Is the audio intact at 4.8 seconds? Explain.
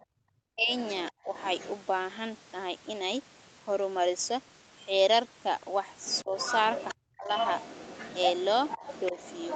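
Yes, the speech at 4.8 seconds is intact, with no dropout, glitch or other fault at that moment.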